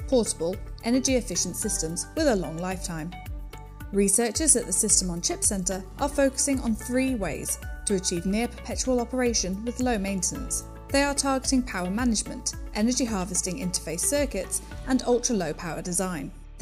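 There are no technical faults to describe at any point in the clip.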